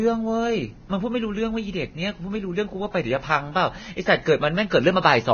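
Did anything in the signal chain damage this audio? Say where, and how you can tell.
Yes, at the codec stage. All the way through this speech the top end stops dead at about 6.5 kHz, and what's left up high is hissy and grainy, with roughened tones and consonant attacks smeared. That's likely heavy Vorbis compression, at a bitrate somewhere around 18 kbps. The encoder cut the band there to save bits, then quantised the remaining treble residue so coarsely that its fine structure was replaced by noise of roughly the same energy.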